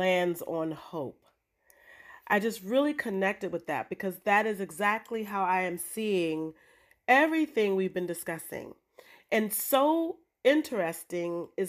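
No dropouts, clicks, distortion or timing glitches turn up anywhere in this speech recording.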